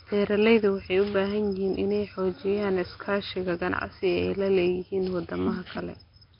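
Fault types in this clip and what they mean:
Nellymoser compression: the whole clip has a rough, hissy halo and a smeared, underwater quality. Nothing is heard above 5.3 kHz. The damage is heavy, likely from Flash's Nellymoser Asao codec at a low bitrate around 22 kbps, with weak bands replaced by noise.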